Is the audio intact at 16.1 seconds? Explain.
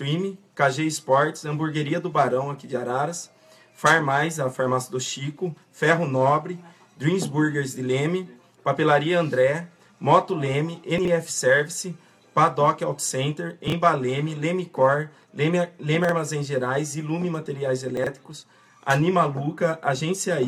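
No. Between about 16.05 and 16.12 s there's a chunks out of order fault. One short slice of audio, about 23 ms long, turns up two chunks late and plays after material that should follow it. Nothing goes missing, but the sequence gets shuffled and you get three hard joins, so it comes across as a quick jumbled stutter.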